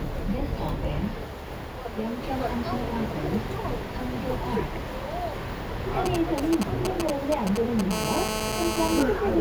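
A recording of everyday sounds carries two kinds of interference from a nearby 2G handset. From 6.06 to 7.81 s there are GSM signalling bursts: galloping dit-dit-dit clusters of brief buzzes at roughly the same level as the sound. These come from a phone's short bursts of radio pulses at 216.7 Hz being rectified by the audio circuitry. On a spectrogram they appear as short, broadband vertical stripes in irregular groups, and the waveform shows spiky packets. From 7.91 to 9.03 s a continuous GSM phone buzz follows, a harsh, raspy tone at about 217 Hz sitting about 2 dB below the sound. This is the handset transmitting steadily as in a call, with each 216.7 Hz radio pulse demodulated into the audio. A spectrogram shows evenly spaced horizontal harmonic lines stacked from 217 Hz upward, and the waveform shows a regular square-edged pulse train unrelated to the sound.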